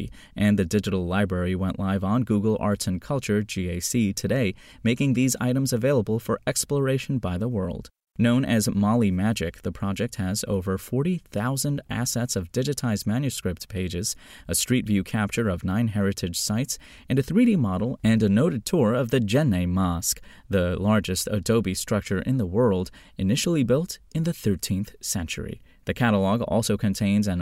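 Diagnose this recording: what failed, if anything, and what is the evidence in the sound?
Nothing stood out on listening that points to a failure at any stage of the chain for this speech recording.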